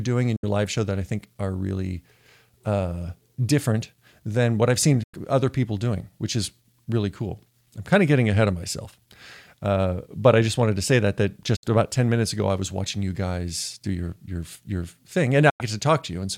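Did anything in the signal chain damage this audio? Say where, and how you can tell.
Yes. The damage happened at reception, where a digital broadcast dropout left four short mutes in this speech. They occur at 0.36 s just before "live show that I", at 5.03 s, at 11.56 s between "to say that that" and "about ten minutes ago", and at 15.50 s after "your your your thing". Each gap lasts 64 or 96 ms and fades out over 8 ms. That pattern fits the receiver muting two or three corrupt frames of about 32 ms each, so that audio is lost.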